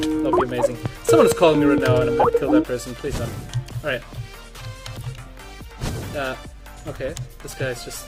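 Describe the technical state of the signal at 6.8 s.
At 6.8 s you're inside an adaptive stream at a lower bitrate, which runs from 3.57 s to the end. The player switched abruptly, with no gap, to a leaner version that sounds like roughly half the bitrate. Codec artefacts rise.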